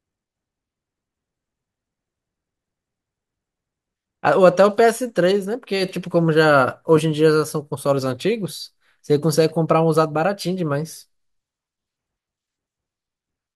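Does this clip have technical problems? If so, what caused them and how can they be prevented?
No, there are no technical problems in this speech recording. Nothing in it needs a fix, so there is nothing to prevent.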